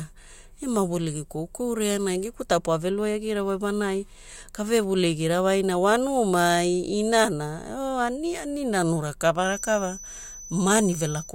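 Feedback whistle from 9.35 s onward: a 6 kHz tone at one pitch, slowly swelling and fading, about 15 dB under the speech, likely a speaker-to-microphone loop held just short of runaway.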